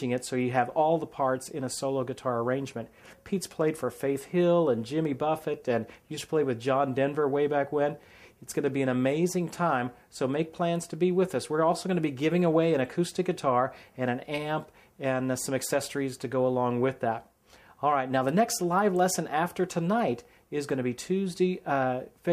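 Nothing here goes wrong technically: the audio carries on from beginning to end without anything breaking in.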